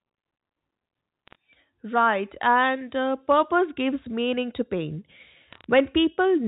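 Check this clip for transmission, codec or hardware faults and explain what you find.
Two short bursts of bit errors on a digital phone line, at 1.27 to 1.35 s and 5.52 to 5.64 s, sit on the G.711 mu-law telephone band. Flipped bits corrupt single samples, and hits on sign or high bits give sharp ticks, heard as brief crackle over the speech. The first burst is denser, with roughly one bit in 150 wrong.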